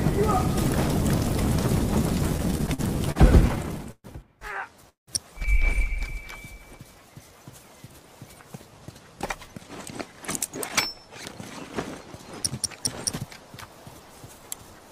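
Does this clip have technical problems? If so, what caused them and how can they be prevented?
Yes. From 2.37 to 4.06 s there are repeated stalls (stutter). Packets arrived late, so the jitter buffer kept running empty. The receiver stretched the last sound across 15 gaps, the longest 126 ms. About 330 ms was filled in, roughly a fifth of that span, and nothing was lost. A deeper adaptive jitter buffer or a steadier network path would prevent this.

At 4.89 s a call audio freeze stops the audio for 182 ms, most of it (150 ms) silent, and then it resumes where it stopped. The likely cause is packets held up in transit, emptying the buffer. Prioritising voice traffic on the network would prevent this.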